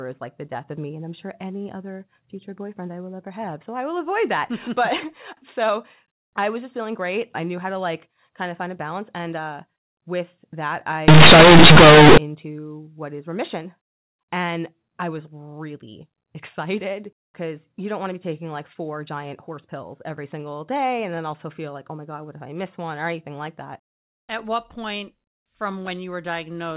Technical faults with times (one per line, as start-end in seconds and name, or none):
11.08-12.18 companded audio read as linear